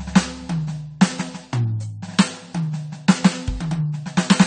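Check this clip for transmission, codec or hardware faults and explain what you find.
One fault runs through the whole music clip: AAC compression. The sound is dull and smeared, with nothing above 9 kHz and a warbling, fizzy texture on sustained tones. This likely comes from AAC-LC coding starved of bits, consistent with a rate near 32 kbps, lowering the cut-off and thinning the spectrum into holes.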